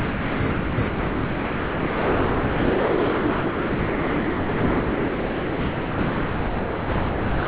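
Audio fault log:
0.0–0.4 s, 0.5–0.78 s and 0.88 s to the end: sound dropped by the voice detector. The sound keeps giving way to a flat, steady hiss of comfort noise, with only brief real stretches at 0.4–0.5 s and 0.78–0.88 s before it drops out for the last 6.6 s. The sender's detector likely judged this non-speech sound to be background and stopped sending, so the far end filled the gaps with noise. What does get through stops sharply at 4 kHz, which fits a G.711 call path.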